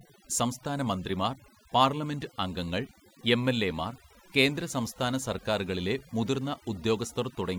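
Overdone noise removal runs throughout the speech. Frequency bands near the noise estimate are cut hard, taking quiet parts of the voice with them and leaving twinkling specks in near silence.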